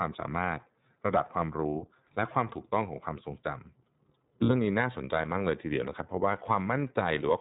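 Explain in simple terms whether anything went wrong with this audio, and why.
The whole clip has passed through the iLBC codec, a narrowband internet-calling codec. Everything above 4 kHz is gone, so the speech sounds muffled and a bit rough and synthetic. The damage is easy to hear from start to finish.

There are also lost iLBC frames at about 4.44 to 4.51 s. A short burst of audio went missing, roughly 60 ms, which fits two 30 ms frames. The decoder filled the gap by repeating the last bit of voice with a little noise, so it sounds like a brief buzzy held vowel before the speech snaps back.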